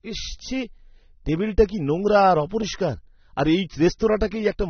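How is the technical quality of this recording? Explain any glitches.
The technical quality is compromised by audible codec damage throughout the speech. The likely cause is AAC compression, AAC-LC at a low bitrate, which fits around 24 kbps. With so few bits, the encoder quantises its frequency lines coarsely against a hearing model and drops the top band, so nothing remains above 6.3 kHz. The speech sounds plainly dull and smeared, with a warbling or fizzy texture on sustained sounds and sibilants.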